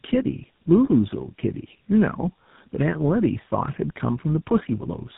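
From start to finish the speech sounds rough, muffled and warbly, with nothing above about 3.8 kHz. The cause is tandem speech coding: the audio was squeezed through two low-rate speech codecs in a row, which fits a mobile AMR-NB stage and a GSM full-rate stage joined by a plain telephone link. The second coder had to model the first coder's already degraded output, so the artefacts stack.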